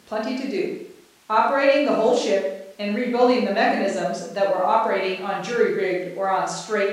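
Nothing goes wrong anywhere in this recording; the speech carries on without any dropout, glitch or other fault showing up along the way.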